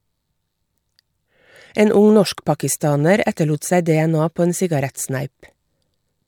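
Nothing in the recording stood out as a technical problem on listening.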